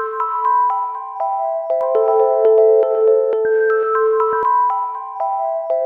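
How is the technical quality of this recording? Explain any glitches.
The recording has one clear glitch: a doubled audio track. From 1.81 s to 4.43 s, a second copy of the sound plays alongside the first. It trails by about one second and is roughly as loud as the original. The copy has full bandwidth, with no decay or room colour, so it does not sound like an echo. It cuts in and out abruptly at both ends. The likely cause is the same audio being captured twice, once through a slower path, or an edit leaving two offset copies.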